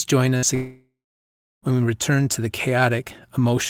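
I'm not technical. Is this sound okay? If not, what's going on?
No. First, a burst of packet loss: a few pieces of the speech got lost on the way. From 0.37 to 0.46 s the system fills the hole by stretching the last sound into a short buzz or hiss, and about 60 ms of speech never arrives.

Then a long network dropout is the likely cause of a much bigger hole, from 0.55 to 1.65 s. The last sound is stretched and fades, then about 670 ms of silence follows. Over a second of speech is lost before it resumes on "we return to the".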